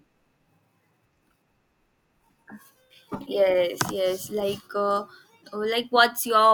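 A short, sharp chirp-like blip cuts into this speech recording from about 3.26 to 3.28 s, a burst of stray energy lasting only around 20 ms and peaking at roughly -25 dBFS. It is a corrupt frame decoded: damaged bits in a handful of consecutive compressed frames were played rather than concealed, so misread gains and codes placed energy at the wrong frequencies for just the span of those frames.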